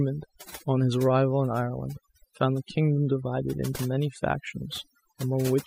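From start to finish, the speech carries overdone noise removal: a noise reduction stage has been pushed far too hard on a noisy recording. Any frequency band that sits close to its noise estimate is cut deeply or switched off, and the softer parts of the voice are treated as noise and removed with it. The background drops and breaks up into twinkling, chirping specks.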